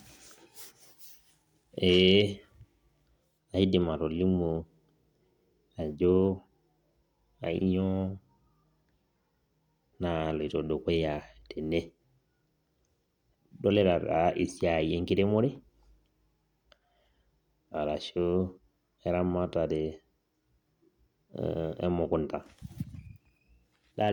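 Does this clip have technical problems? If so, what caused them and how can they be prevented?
No, nothing stood out on listening to this speech recording, so there is nothing here that needs tracing to a cause or preventing.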